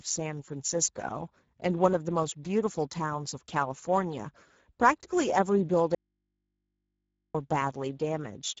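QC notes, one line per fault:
Throughout: Speex codec. The speech comes across noisy and hoarse, with that grainy, slightly synthetic edge CELP coding gives when it's short of bits for the excitation. The damage is plainly audible, which fits a rate of around 10 kbps. There's nothing above 7.7 kHz, and the top band above 4 kHz sounds like shaped noise rather than real detail, so sibilants and breath come out as a smeared hiss.
5.95 to 7.35 s: audio dropout to a faint residue. The speech cuts off abruptly for about 1.4 s and snaps back just as suddenly, with no fade either side, so it doesn't read as a natural pause. What's left in the gap is mains hum sitting very low, way below the speech. The likely cause is the wanted signal being lost upstream while the input and the path after it stayed live, so the open line's hum carried straight through.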